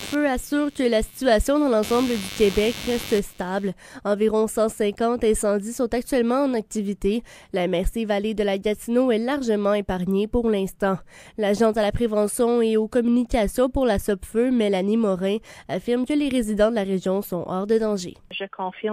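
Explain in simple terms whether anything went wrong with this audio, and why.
For the first 3.7 seconds, a rough buzzing chirp sits underneath the sound, pulsing about a hundred times a second. It then stops. This is computer activity noise. When the computer's processor, graphics card or mouse suddenly work harder, the electrical ground shared with the audio circuit shifts. That leaks into the recording as buzzing that follows the computer's workload, not the sound being recorded.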